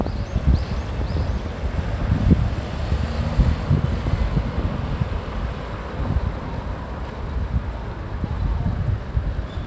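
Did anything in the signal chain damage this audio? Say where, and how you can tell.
No, nothing in the chain damaged these everyday sounds. They reach us through a call path whose codec sounds consistent with G.722, with nothing above 8 kHz, as that codec's wideband limit would give.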